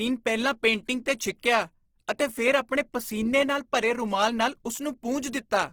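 Throughout, the speech sounds plainly grainy and rough, likely from Opus compression in CELT mode filling starved bands with folded or noise content, which fits 16 kbps.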